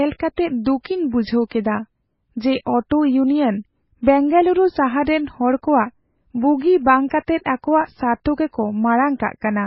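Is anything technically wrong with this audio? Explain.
Yes. Throughout the speech, the sound shows transcoding between lossy codecs, likely an MP3 at 16 kbit/s later re-encoded as AAC-LC at 32 kbit/s. Nothing survives above 5.6 kHz, the first encoder's cut-off, while the second encoder's own smearing layers over the earlier swirly artefacts. Two distinct artefact textures heard together set this apart from a single low-bitrate encode.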